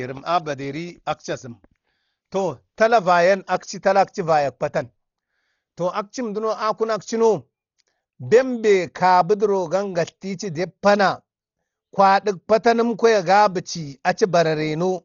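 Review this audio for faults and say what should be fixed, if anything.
The speech sounds dull throughout, with nothing above 6.9 kHz and a rough, fluttering noise around the voice. That points to heavy Dolby Digital compression, likely at a low bitrate around 32 kbps, where the encoder narrows the band and the decoder fills bit-starved lines with dither noise. Re-encode from the original source at a much higher bitrate so the top end and clean detail survive.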